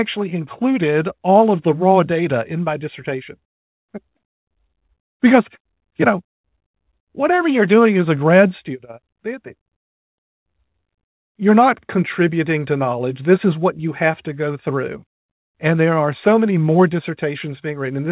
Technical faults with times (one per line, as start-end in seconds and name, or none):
none